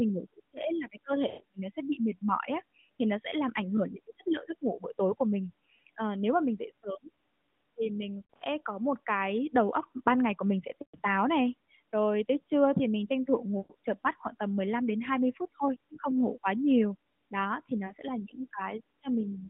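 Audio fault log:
1.28–1.42 s, 8.34–8.42 s, 10.82–10.99 s, 13.58–13.73 s, 17.86–17.93 s: lost AMR speech frames. The narrowband speech briefly warbles, stretches and fades for up to 120 ms because the decoder repeats its last good pitch and vocal-tract settings at falling gain.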